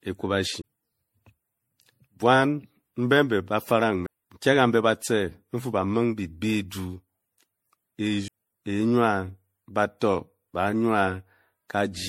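Generation loss throughout: swirly, hollow speech with smeared attacks and nothing above 16.5 kHz, likely from roughly ten rounds of re-encoding, consistent with 64 kbit/s MP3.

CD skip at 0.62 to 0.64 s, 4.06 s and 8.28 s: the laser jumped tracks, giving a very brief mute before the sound resumes elsewhere.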